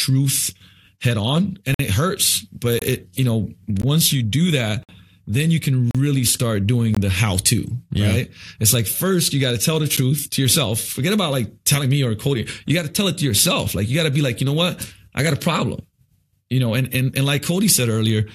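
Gaps between stream segments hit at 1.74–1.80 s (after "head on and"), 2.79–2.82, 3.82, 4.83–4.89, 5.91–5.95, 6.95–6.97 and 9.97 s. Mistimed segment boundaries open hard-edged silent holes of about 9 to 56 ms, spaced at roughly one-second segment intervals. Unlike a dropout, no speech is lost: it resumes exactly where it stopped.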